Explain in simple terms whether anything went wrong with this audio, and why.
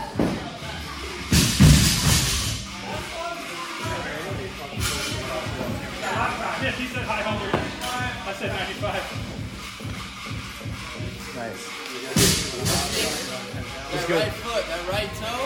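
Nothing went wrong with the technical side of this recording: the sound holds steady throughout, with no dropouts, glitches or damage to the signal at any point.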